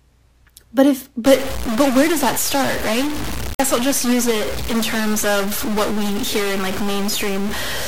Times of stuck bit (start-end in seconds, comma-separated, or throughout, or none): 1.26-7.88